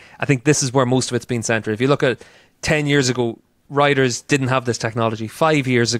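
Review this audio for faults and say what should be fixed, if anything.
Nothing here needs fixing: I couldn't hear any faults anywhere in the speech, so it can be left as it is.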